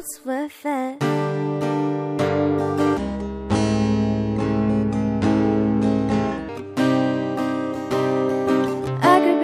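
At 2.97 s the audio drops into a section at the wrong speed, lasting until 6.49 s. Playback runs at 0.683 times the original rate. Pitch and tempo fall together, so everything sounds deep and dragged, roughly seven semitones lower. The shift is abrupt at both edges. Normal speed returns at 6.49 s. The likely cause is a stretch of audio fitted to the wrong clock during editing or playback.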